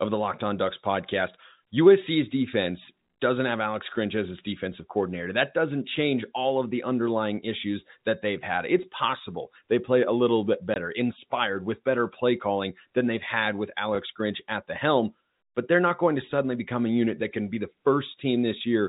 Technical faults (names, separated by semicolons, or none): packet loss filled with silence